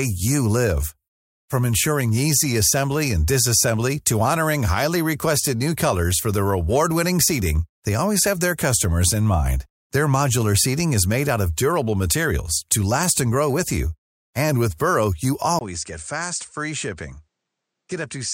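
At 15.59 s a gap of about 20 ms breaks the speech. The input was likely switched to a poorer device. From then to the end, nothing above 9.1 kHz remains, so the sound turns dull. Level falls roughly 10 dB. Faint new background noise appears.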